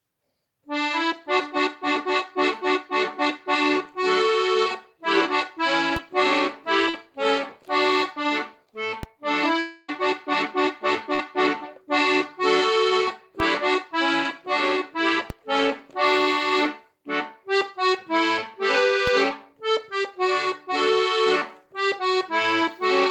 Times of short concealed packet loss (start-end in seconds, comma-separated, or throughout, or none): 6.89-6.95